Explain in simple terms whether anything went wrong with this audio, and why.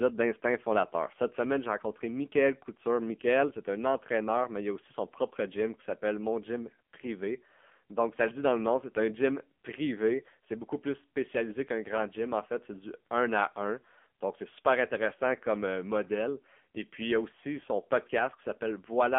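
From start to finish, the speech has passed through the AMR narrowband mobile codec. Everything above 3.4 kHz is cut, and heavy compression makes voices buzzy and synthetic.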